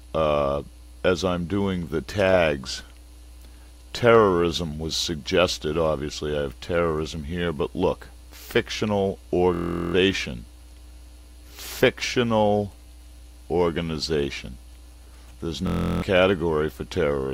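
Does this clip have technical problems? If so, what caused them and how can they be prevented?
Yes. A system hang loop occurs at 9.54 to 9.94 s and 15.67 to 16.02 s. A frozen system left the hardware replaying one 23.2 ms buffer, which fits 1024 samples, as a 43.1 Hz buzz. The waveform shows identical repeating blocks, and the spectrogram shows evenly spaced vertical stripes. Stable drivers and a watchdog that mutes output on stalls prevent it.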